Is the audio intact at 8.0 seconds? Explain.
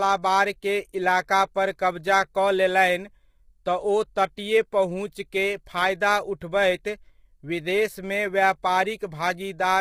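No. At 8.0 seconds the speech is rough and grainy, as it is across the whole clip. There is noise between the pitch harmonics and a thin, synthetic top band. This is likely low-delay AAC compression at a low bitrate, around 24 kbps, where short frames resolve harmonics poorly.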